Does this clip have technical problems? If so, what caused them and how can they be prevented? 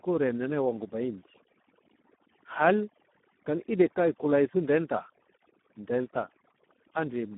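Yes. Throughout the speech, the background drops and breaks up into twinkling specks. This is overdone noise removal: a noise reducer set too strong shuts off individual frequency bands near its noise estimate, taking quiet voice detail along with the noise. Set the reduction more gently, or record in a quieter space so less is needed.

The voice is also hoarse, noisy and edging toward robotic, confined to roughly 200 Hz to 3.4 kHz with nothing above 3.8 kHz. That is heavy Speex codec damage, which fits an 8 kbps setting where the CELP encoder has too few bits to describe the excitation. Use a higher Speex quality setting or a modern codec such as Opus.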